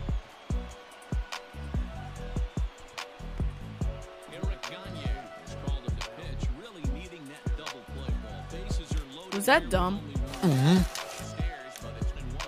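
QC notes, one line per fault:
5.92–5.94 s: compressed frames skipped. The audio jumps ahead by roughly 0.3 s, which fits about ten dropped frames of around 23 ms each.
12.15 s: compressed frames skipped. A second forward jump of roughly a fifth of a second, again consistent with 23 ms frames.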